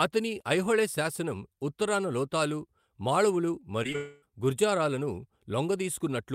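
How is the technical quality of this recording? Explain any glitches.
The recording has audible network faults in one spot, all just after "శాసనం ఉత్తరాన లోతాలు మాళవులు", where the speech briefly breaks down before recovering.

At 3.83 to 3.86 s and again at 3.92 to 3.96 s there is short concealed packet loss. About 20 ms of audio failed to arrive each time. The receiver patched the gap by extending the preceding sound before rejoining the real signal, so each one registers as a quick smear or wobble rather than a gap.

From 3.96 to 4.32 s comes what is likely a long network dropout. Roughly a quarter of a second of speech was lost. Unlike the brief patches, the concealment here runs for about 260 ms as a stretched, fading buzz or hiss that never reaches silence. The speech then resumes with that portion missing.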